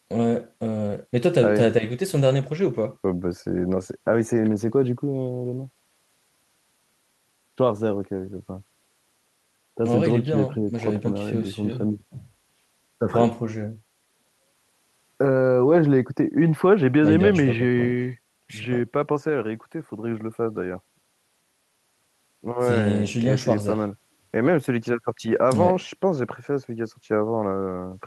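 Speech recording, with no audible technical faults anywhere.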